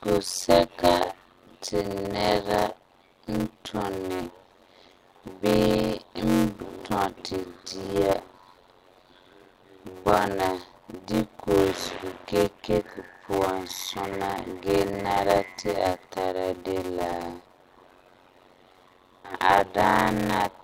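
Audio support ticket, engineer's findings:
Block size mismatch (padded), throughout: 91.9 Hz buzz, speech slowed to 0.533x at about normal pitch. Fits 256-sample writes zero-padded into 480-sample reads. Waveform: regular flat gaps. Spectrogram: vertical stripes.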